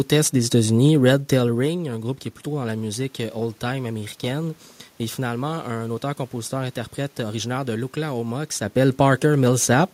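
No technical faults are present.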